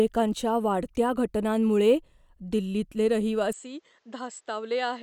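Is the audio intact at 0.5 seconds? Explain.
Yes, the audio is intact at 0.5 seconds, with no audible fault at that point.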